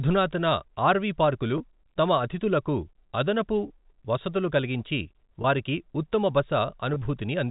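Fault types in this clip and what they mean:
Packet loss with pitch repetition: four single 20 ms gaps, at 1.58, 3.68, 5.42 and 6.94 s, where the receiver fills each dropout by repeating the last pitch cycle. Each sounds like a brief held, slightly buzzy tone.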